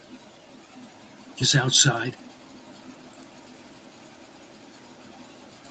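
At 1.41 s the audio jumps forward abruptly with no gap, about 0.7 s of speech missing: a skip ahead, where a stretch was discarded while later audio already waited. From 1.67 to 3.54 s the speech sounds hurried, running 16% fast at unchanged pitch. This is a jitter buffer speed-up trimming short pitch-period pieces, roughly 0.3 s in total, to shrink excess delay.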